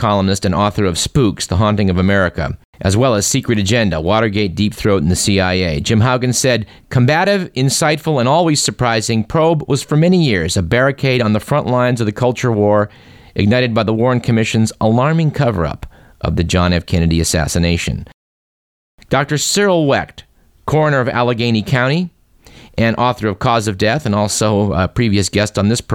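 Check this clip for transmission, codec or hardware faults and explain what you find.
Nothing wrong can be heard in the speech: the signal stays continuous and stable throughout, with no sign of trouble anywhere along the chain from capture to playback.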